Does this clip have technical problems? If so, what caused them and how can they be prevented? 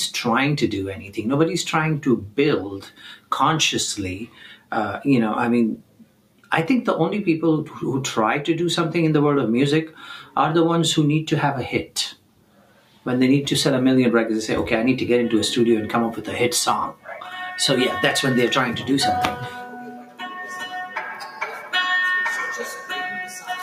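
Yes. A noise suppressor meant for speech was applied to this non-speech audio throughout, and its gain keeps swinging by about 10 dB. It treats sustained tones and decays as if they were noise, so transients stay intact while held sound and tails pump and thin out. A compressor's pumping follows loudness, but this follows how steady the sound is. To prevent it, bypass speech noise suppression for music or ambient content.

The noise suppressor cut the sound at 0.98 to 1.18 s (about 8 dB), 2.84 to 3.0 s (about 10 dB), 4.24 to 4.72 s, 5.78 to 6.51 s, 12.13 to 13.06 s, 19.68 to 20.22 s (each about 12 dB), and 21.2 to 21.73 s and 23.25 to 23.5 s (about 8 dB). A dropout or gap would silence the onset too. Disabling the suppressor or lowering its strength prevents these dips.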